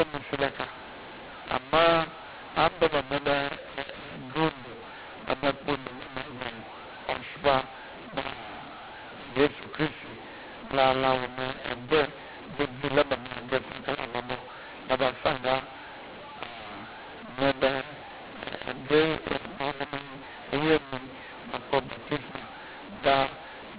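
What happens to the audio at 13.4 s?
At 13.4 s, as throughout the clip, the mu-law and A-law mix-up is present: telephone speech coded with mu-law is being decoded as A-law. The mismatched logarithmic curves scramble sample levels, so the speech sounds harsh and distorted and the quietest moments fill with noise.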